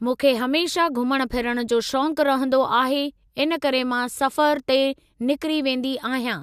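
A short bit of speech, and nothing technically wrong turns up anywhere in it.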